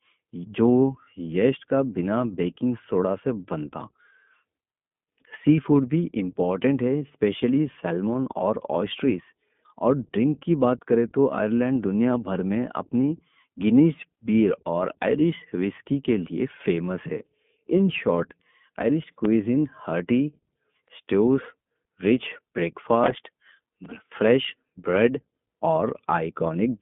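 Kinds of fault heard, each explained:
iLBC codec: the narrowband speech codec is on throughout; each 20 ms frame is coded independently, leaving a band of roughly 150 Hz to 3.5 kHz and plainly rough, synthetic speech.
Processor overload crackle: from 19.03 to 19.25 s and 23.04 to 24.14 s, short buffers of about 5 ms miss their deadlines repeatedly and replay stale audio, causing gritty crackle.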